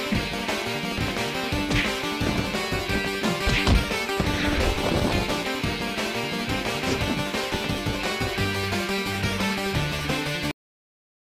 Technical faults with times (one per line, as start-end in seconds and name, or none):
10.51-11.24 cut-off end